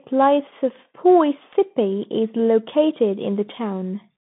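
From start to finish the speech carries the Bluetooth CVSD headset codec. Its one-bit delta modulation, consistent with a 64 kbps link, limits the line band to roughly 150 Hz to 3.6 kHz, with nothing above 3.8 kHz. The damage is plainly audible: s sounds turn scratchy, loud bright passages distort as the adaptive step falls behind, and a granular hiss sits beneath the speech. A simple low-pass filter would dull the sound without that grain or scratch.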